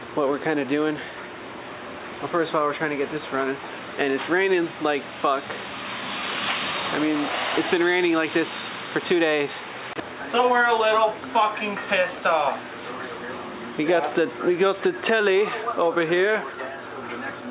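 No technical faults can be heard in the audio, which carries the band-limited sound of a call path with nothing above 4 kHz, consistent with G.711 A-law coding at 64 kbps.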